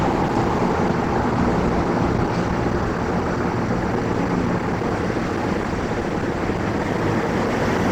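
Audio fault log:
throughout Opus compression: likely a starved Opus encoder in hybrid mode, fitting about 16 kbps, leaves the audio plainly grainy, rough and hoarse, though content still reaches 20.1 kHz.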